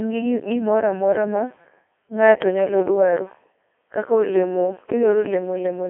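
From start to finish the speech passes through a Codec 2 vocoder, whose heavy damage fits its 3.2 kbit/s mode. Voices are resynthesised from sine waves, giving a robotic, buzzy tone within roughly 0.3 to 3.4 kHz and nothing above 3.7 kHz, unlike plain telephone band-limiting, which keeps natural timbre.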